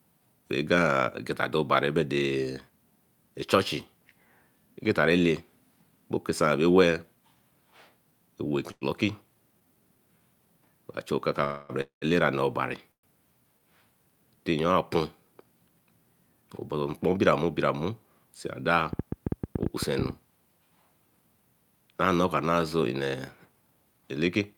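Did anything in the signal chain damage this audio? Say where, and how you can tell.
Yes. In the network and jitter buffer stage, repeated stalls (stutter) between 8.71 and 10.02 s bring four brief drawn-out continuations, the longest 99 ms. They are shorter and more frequent than a freeze, and nothing is lost.

Call audio freezes at 11.44–11.72 s (after "chu okaka", before "bra elera"), 11.81–12.05 s (after "chu okaka bra") and 12.92–13.06 s hold the last sound, then fade to silence in the later two. The likely cause is delayed network packets.

A jitter buffer speed-up runs the audio at 108% from 16.29 to 17.60 s, trimming about a tenth of a second, and at 110% from 23.85 to 24.54 s. The pitch stays put, unlike a resampling error.

A train of clicks from 18.93 to 20.11 s gives about fifteen same-shaped pops at an irregular 11 per second, roughly 10 dB above the signal. The likely source is analogue interference or a faulty connection or power supply, not codec damage.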